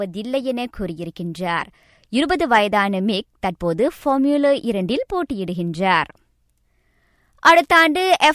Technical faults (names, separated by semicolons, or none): none